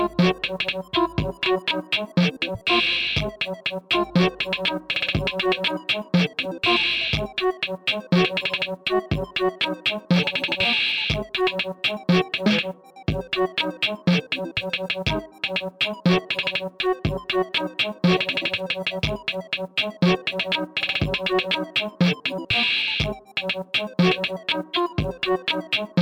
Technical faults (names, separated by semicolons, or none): none